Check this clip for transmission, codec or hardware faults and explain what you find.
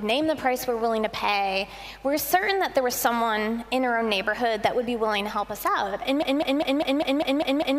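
A broken-record loop takes over from 6.23 s to the end: a 0.2 s fragment repeats exactly, eight times, back to back. The likely cause is a stalled player or stream resending its last buffer, so the intended audio is lost. On a spectrogram, identical blocks tile evenly every 0.2 s.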